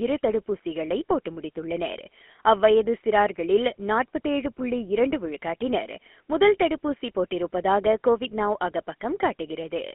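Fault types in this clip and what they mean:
GSM full-rate codec: old pulse-driven mobile coding throughout, squeezing the speech into a 250 Hz to 3.4 kHz band with plainly buzzy, gravelly roughness.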